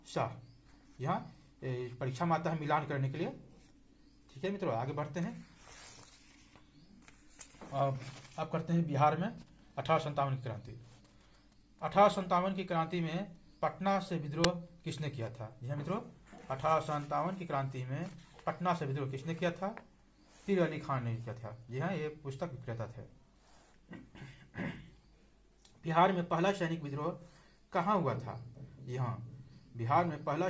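At 14.44 s there's a short, loud crack, and that's an uninitialised buffer. A block got sent to playback before any audio was written into it, so whatever junk was sitting in memory came out as samples. It lasts about 5.8 ms, which fits a 256-sample buffer, and it's a harsh crack sitting on top of a band-limited call sound with nothing above 8 kHz.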